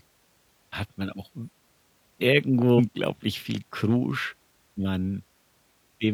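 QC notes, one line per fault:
2.74–2.80 s and 4.74–4.79 s: damaged data in a compressed stream. Two short bursts of about 50–60 ms are heard as a chirp or blip breaking into the speech. Corrupted bytes in the encoded frames make the decoder misread them, lose sync and hunt for the next valid frame header.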